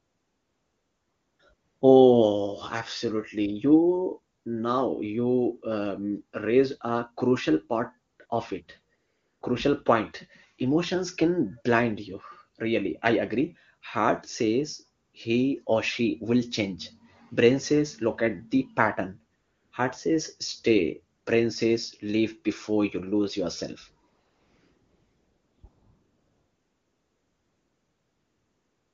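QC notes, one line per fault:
0.00 to end, AMR comfort noise: eleven gaps where speech frames stopped and the receiver filled in smooth synthetic noise. The longest are 0.00 to 1.39 s, 24.09 to 25.63 s and 25.67 s to the end. Short ones sit just before "now you um" (4.35 s) and "he or she will" (15.05 s), and just after "says stay" (21.17 s). The real background switches to a steady hiss and back.
6.39 to 10.71 s, de-emphasis applied wrongly: a treble cut meant to undo pre-emphasis lands on audio that had none, or is applied a second time. The response slopes down to about 8 dB lower at 10 kHz than at 1 kHz, so this stretch sounds dull and muffled against its surroundings.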